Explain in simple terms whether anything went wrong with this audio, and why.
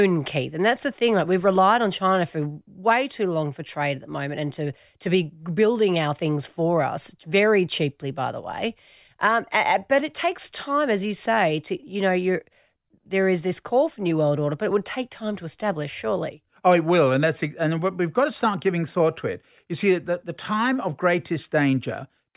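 Nothing went wrong with this audio, because no fault can be heard anywhere in it.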